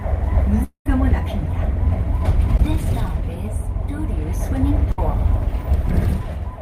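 At 0.63 s the sound breaks off and does not return until 0.86 s. The last sound is carried on as a fading buzz or hiss, and the final 110 ms or so is near silence. When the audio resumes, about 220 ms of it is simply gone. The likely cause is a long network dropout. No audio reached the receiver for that stretch, so it could only stretch out what it already had.

From 2.57 to 2.60 s there is a brief smear. This is a short concealed packet loss. About 10 ms of audio never reached the decoder in time. The receiver patched the hole by continuing the preceding sound for roughly 12 ms, then blended back into the real signal. The result is a tiny wobble rather than an obvious gap.

At 4.92 s a burst of packet loss begins and runs to 4.99 s. Around 60 ms of consecutive audio was lost or arrived too late to play. The receiver filled the space by extending the last sound and turning it down as the gap went on. 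This gives a short held buzz or fading hiss. The audio then picks up further along, with those 60 ms missing.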